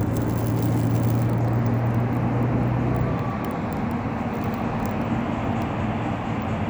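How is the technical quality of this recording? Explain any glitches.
No glitches or technical faults.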